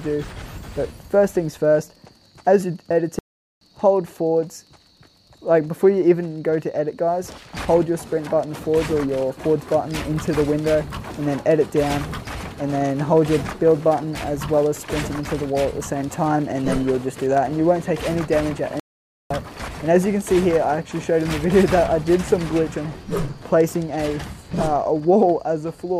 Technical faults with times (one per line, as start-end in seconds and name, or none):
3.19-3.61 playback stall
18.80-19.30 playback stall